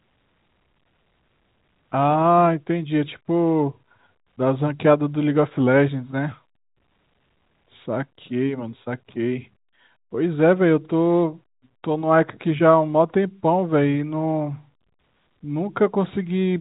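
Speech over G.711 telephone coding, with the band ending below 4 kHz as that format requires, and no technical faults to report.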